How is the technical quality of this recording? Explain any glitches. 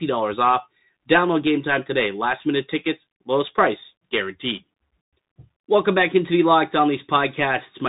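The quality is poor: the whole recording passes through a Bluetooth CVSD headset codec. Throughout, the speech sounds muffled, with nothing above 3.8 kHz, plus scratchy s sounds and granular hiss. This narrowband link, consistent with a 64 kbps stream, codes one up-or-down bit per sample with an adapting step.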